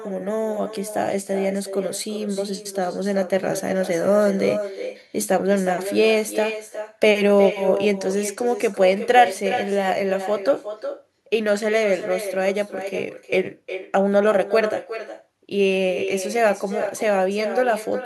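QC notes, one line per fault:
Throughout: echo with no canceller. Every phrase of speech returns roughly 0.4 s later as a quieter, thinner copy, about 10 dB below the original. The far end's loudspeaker feeds its microphone. Nothing cancels that path, so the network round trip sends the talker back.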